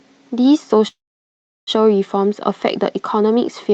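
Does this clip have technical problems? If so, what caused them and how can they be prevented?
Yes. From 0.87 s to 1.70 s there is a call audio freeze. The last sound stretches into a short fading tail, then about 0.71 s of near silence before the speech resumes exactly where it left off. Roughly 0.8 s has been inserted and nothing is lost, which pushes everything after it later by that amount. The likely cause is packets stalling in transit so the jitter buffer ran dry and the receiver filled the gap. Prevention: give the call a more stable network path with less congestion, and let the jitter buffer adapt its depth to absorb delivery stalls.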